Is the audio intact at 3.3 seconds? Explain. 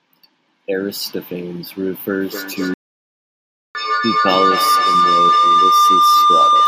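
No. A playback stall runs from 2.74 to 3.75 s, so at 3.3 s the output is silent. The sound cuts off in mid-flow for about 1.01 s, then resumes. The likely cause is that the player ran out of buffered data, or its processing thread was blocked, so nothing reached the output until it recovered. What follows the gap continues either from where it stopped or from a later point.

Under that gap, a feedback howl is already underway, starting at 2.21 s and lasting to the end of the clip. Two devices in the same room are on the same call. Sound from one loudspeaker reaches the other's microphone and comes back louder on each trip. The repeats, about every 300 ms, grow rather than fade and narrow to a tone of around 1 kHz. At its peak, the tone is about 8 dB louder than the speech.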